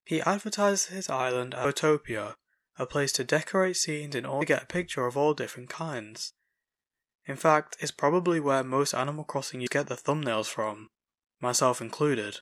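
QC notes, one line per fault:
1.64, 4.41 and 9.66 s, compressed frames skipped: the speech jumps forward three times, losing roughly 0.3, 0.2 and 0.4 s of audio. The sizes of these gaps fit whole frames of about 26.1 ms being dropped, around ten, ten and fifteen of them, either missing from the stream or rejected by the decoder. Because adjacent frames overlap, each join is a short smeared blip, not a sharp click, so the jumps sound slurred.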